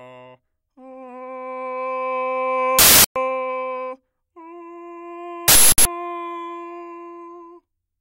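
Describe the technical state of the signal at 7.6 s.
At 7.6 s the music is intact, with no audible fault in the signal at that point.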